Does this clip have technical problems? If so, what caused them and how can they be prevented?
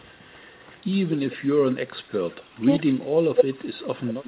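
Yes. An echo leak runs through 0.0 to 0.98 s, 1.3 to 1.49 s, 2.11 to 2.61 s and 3.37 s to the end. A faint second copy of the speech trails the original by about 186 to 199 ms. It starts well below the direct sound and grows louder by the final stretch. The likely cause is a far-end loudspeaker whose echo canceller let part of its microphone pickup return. It differs from room reverberation because it is a distinct repeat at a fixed delay, not a smooth decaying tail. Keeping the echo canceller converged, lowering speaker volume, or using a headset prevents it.

Speech suppressed in double talk occurs at 1.49 to 2.08 s and 2.82 to 3.37 s. The speech dips in pieces, by about 25 dB at its deepest, over roughly half a second each time. When both sides talked at once, the echo canceller likely could not separate the talker from the returning echo and turned everything down. Unlike packet loss, it comes from the echo canceller turning the speech down, not from missing network packets. 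A canceller with better double-talk detection, or a headset, avoids it.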